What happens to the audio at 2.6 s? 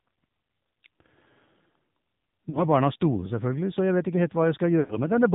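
Lost AMR speech frames hit between 2.50 and 2.63 s. About 40 ms of speech data failed its error check on the radio link, so the decoder filled the hole by reusing the last good pitch and vocal tract settings at falling gain. The sound smears briefly, warbles and sags in level, then recovers slightly rough just before "barna store selvfølgelig så", already buzzy from the low-rate narrowband mobile coding.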